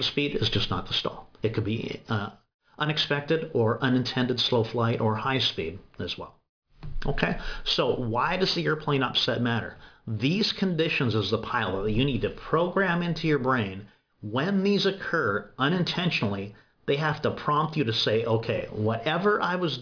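Throughout, aliasing: the rate was lowered, apparently to about 11 kHz, without filtering, so content above 5.5 kHz folds back as fairly strong, gritty, metallic false tones.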